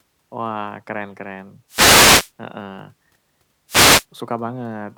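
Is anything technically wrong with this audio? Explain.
Yes. There are two wireless microphone noise hits in this speech. The first runs from 1.68 to 2.32 s. The second runs from 3.67 to 4.06 s. An analogue FM radio microphone loses signal strength when reflected paths cancel the direct one. As the signal fades, receiver noise rises over the audio. Each hit sounds like a short swish or burst of static that partly covers the speech, then clears.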